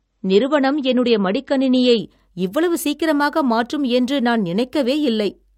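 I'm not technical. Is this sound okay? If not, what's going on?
No. This is an adaptive stream starting at a low bitrate: the player began on a cheaper version of the speech, so until 2.0 s it sounds dull and smeared, then suddenly clears just before "இவ்வளவு சீக்கிரமாக மாற்றும் என்று".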